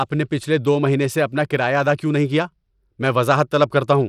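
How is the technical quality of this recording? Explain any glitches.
The recording has plainly audible compression damage for its whole length. Across the speech the treble thins and flickers, a gritty grain rides on top, and nothing is present above 17.1 kHz. The likely cause is Bluetooth SBC compression. Its coarse sub-band quantisation starves the weak upper bands, which fits a rate around 96 kbps. Unlike a simple low-pass filter, the top end flickers and carries grit rather than rolling off cleanly.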